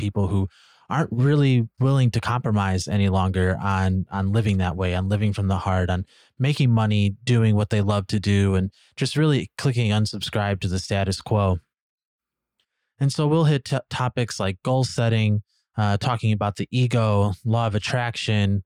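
No technical faults are audible anywhere in the recording.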